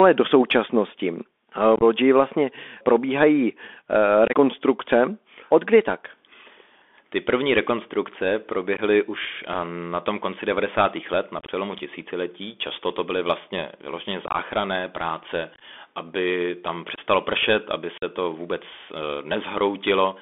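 Speech, carried over a Bluetooth CVSD headset codec at 64 kbps. The band runs from about 250 Hz to 3.5 kHz. Each sample is coded as one up-or-down step, and the damage is plainly audible. A granular hiss sits underneath, s sounds turn scratchy, and loud peaks distort where the step cannot keep up. Unconcealed Bluetooth headset packet loss punches short holes at 1.76, 4.28, 8.77, 11.39, 14.27, 15.54, 16.95 and 17.98 s. Lost packets became silence or an idle pattern, so each hole has abrupt edges. Each loses 15 to 60 ms, some spread over up to 90 ms. Three follow "to byly vlastně vyloženě", "práce aby tam" and "pršet aby".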